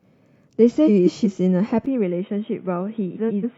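At 0.87 to 1.26 s, frames arrive out of order. Two neighbouring blocks of 186 ms swap places, so the stretch plays with its halves exchanged. It flutters. At 3.15 to 3.45 s, 139 ms blocks swap the same way. No time is lost.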